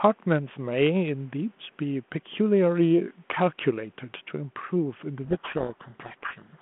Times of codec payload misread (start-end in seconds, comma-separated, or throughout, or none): 5.24-6.61